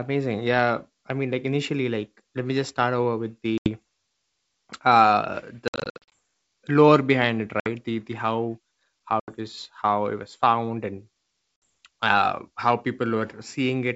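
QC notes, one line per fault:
3.58 s, 5.68–6.13 s, 7.60 s, 9.20 s, 11.65 s, packet loss on an ADPCM call: a few packets (about 20 ms each) were dropped and filled with silence, leaving the G.722 decoder's predictor and step size out of step with the sender's. Each loss is a hard-edged gap of 60–80 ms, except at 5.68–6.13 s, where 280 ms is lost in short holes of up to 60 ms. The speech then resumes slightly distorted before settling.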